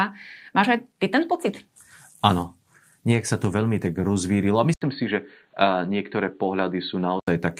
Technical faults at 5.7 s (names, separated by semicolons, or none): input switched to a poorer device